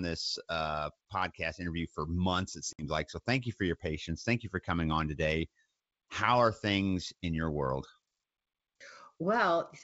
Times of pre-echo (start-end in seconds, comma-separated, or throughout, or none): none